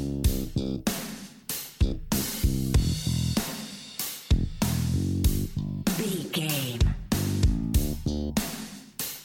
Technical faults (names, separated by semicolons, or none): none